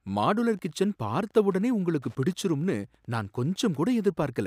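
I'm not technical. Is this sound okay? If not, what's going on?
No. Behind the speech, from start to finish, there is a faint, steady ticking, about ten ticks every second, like a tiny clock running far too fast. This is Wi-Fi interference. A nearby Wi-Fi device sends out a short radio signal every 102.4 milliseconds to announce itself. The audio circuitry picked that signal up and turned it into sound, so each pulse became a tick in the recording.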